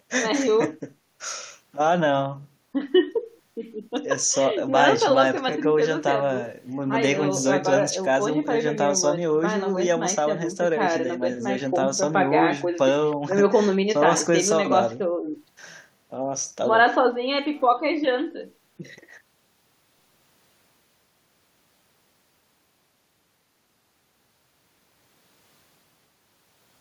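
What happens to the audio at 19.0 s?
At 19.0 s the speech carries on cleanly, with no dropout, click, distortion or other fault to be heard at that moment.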